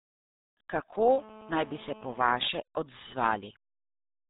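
Muffled, gargly speech runs through the whole clip, with nothing above about 3.8 kHz and a heavy smeared, bubbling quality on every syllable. That is the RealAudio 14.4 codec at work. This early dial-up speech coder rebuilds the voice from a very coarse model of each short frame and discards the upper band entirely. The damage is severe enough that it fits the codec's 8 kbit/s rate. From 1.08 s to 2.50 s a hard, raspy buzz sits under the speech, about 21 dB below it, nearly steady for its whole length and unrelated to anything being said. This is GSM phone buzz. A nearby 2G handset on a call transmits in bursts about 217 times a second, and the audio circuitry rectifies those radio pulses into a 217 Hz tone dense with harmonics. Because the phone is on a call rather than transferring data, the buzz holds nearly steady instead of stuttering on and off.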